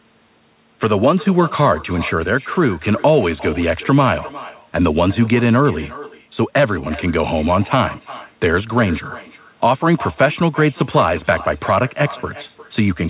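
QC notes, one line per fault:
Throughout, echo with no canceller: every phrase returns roughly 0.4 s later as a quieter copy, about 18 dB down, thin, because the far end's loudspeaker feeds its microphone and nothing strips that signal before it travels back, already band-limited at 4 kHz.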